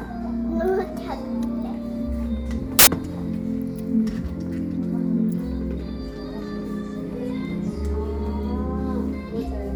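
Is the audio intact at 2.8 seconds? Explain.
No. From 2.79 to 2.87 s, samples built from the wrong bytes put the low bits on top, turning the sound into loud, harsh broadband noise that replaces it outright rather than hissing beneath it.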